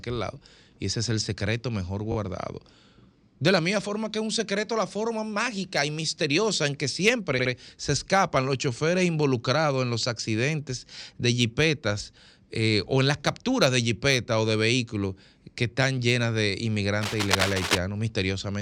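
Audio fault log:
2.11–2.15 s and 7.38–7.51 s, repeated frames: after "es el secreto mejor", a 21 ms block plays twice more, adding 43 ms. After "y misteriosa en que", a 64 ms block plays twice more, adding 128 ms before "se escapan los choferes". The stutter repeats the audio and stretches the timing instead of leaving a gap.
17.01–17.79 s, cable scratch noise: after "que están llenas de", dense, uneven bursts of scratching roughly as loud as the speech, likely from a worn cable or connector being moved. The noise is irregular and crackly, not a steady hiss or a single click.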